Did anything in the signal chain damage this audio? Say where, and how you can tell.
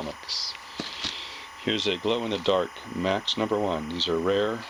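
Yes. A steady chirping warble runs behind the sound from start to finish, sitting about 15 dB below the main material, with its energy concentrated near 1 kHz and 2 kHz. That is timecode bleed in the analogue wiring. A linear timecode signal is leaking in from an adjacent track or cable. Its square wave flips between those two pitches as it encodes bits, and the rhythm of the chirp fits a 25 frames-per-second code.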